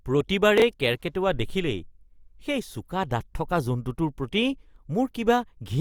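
Chunks out of order from 0.58 to 0.62 s: a 21.3 ms piece of the speech plays after the piece that should follow it, which points to it arriving one chunk late. Nothing is missing, but the swap creates three hard joins, heard as a brief jumbled stutter.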